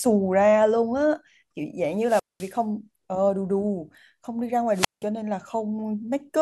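At 1.97 s the speech breaks up in a wireless microphone squelch dropout lasting until 2.61 s. Hiss rises, then the output goes almost silent for about 0.21 s before the voice returns. A second dropout runs from 4.71 to 5.06 s, with a mute of about 0.17 s. Each time, the analogue FM radio link weakened until the receiver's squelch shut the audio off rather than pass pure noise.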